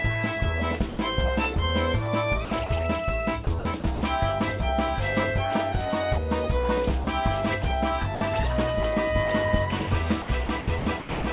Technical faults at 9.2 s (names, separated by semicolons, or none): none